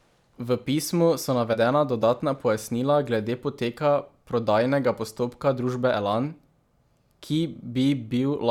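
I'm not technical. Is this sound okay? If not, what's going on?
No. Compressed frames are skipped at about 1.53 to 1.57 s. This speech was stored in small chunks, and a couple of them never got played, either because they were missing from the file or because the player rejected them as damaged. The speech jumps ahead by roughly 40 milliseconds, which fits chunks 20 ms long. At that point a tiny piece of speech vanishes.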